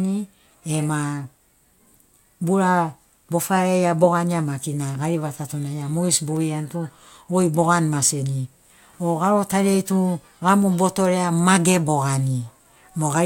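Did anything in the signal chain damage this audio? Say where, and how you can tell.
No, no stage in the chain left an audible mark on this speech recording; there is nothing to point to at any point in it.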